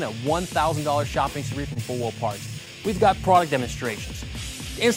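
Scattered short gaps run from 1.73 to 2.88 s. Across that stretch of audio, roughly seven brief dropouts, which points to lost or late packets, were each patched by the receiver stretching the preceding sound forward. Together they account for around 70 ms, about 7 percent of the span, and the longest is around 30 ms. Each patch is heard as a small tick, smear or hiccup. The concealment also adds about 7 ms, so what follows lands slightly late.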